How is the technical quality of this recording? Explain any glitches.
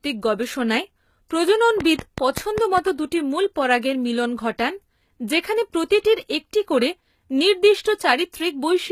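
The recording is speech with three audible faults: codec damage throughout, one smeared attack and a burst of clicks.

Throughout, the sound has the texture of HE-AAC compression, likely at a low bitrate around 20 kbps. The treble is rebuilt from copied lower bands, so s sounds turn gritty and metallic. A spectrogram shows patchy, repeated-looking treble ending abruptly at 14.9 kHz.

At about 1.29 s, pre-echo spreads roughly 20 ms ahead of a sharp onset. The codec's quantisation noise fills the quiet moment before the attack, so a brief hiss precedes it and the attack sounds softened. A waveform shows a low noisy smear just before the rise.

From 1.81 to 2.79 s, a train of clicks ticks over the sound at a steady 5.1 per second, about seven in all, just before "দুটি মূল পরাগের মিলন". They are likely interference or a faulty connection. Each stands about 15 dB above the signal and shows as a thin vertical line on a spectrogram and a narrow spike in the waveform.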